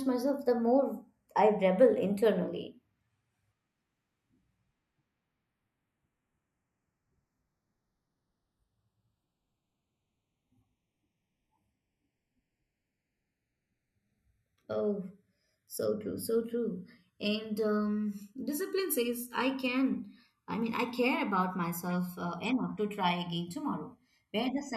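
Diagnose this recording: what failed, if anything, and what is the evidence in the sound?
The two channels are drifting apart, a converter clocking fault. The channels come from devices on separate clocks, off by something like 50 parts per million. So the inter-channel delay grows steadily through the speech, reaching about a millisecond by the end. Summed to mono, that changing delay creates comb-filter notches. They sweep slowly down through the spectrum. The speech takes on a slow, hollow flanging that keeps evolving from start to finish.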